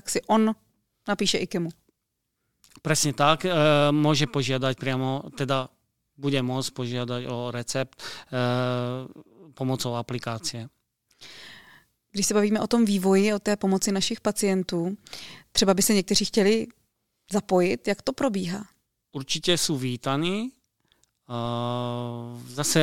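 A brief low thump lands at 21.45 s while the speech carries on unaffected. It is a DC step: the waveform's zero line jumps by about -35 dBFS and then eases back as a 5 Hz high-pass drains the offset away.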